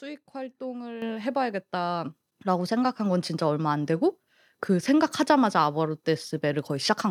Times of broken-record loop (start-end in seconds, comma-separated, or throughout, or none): none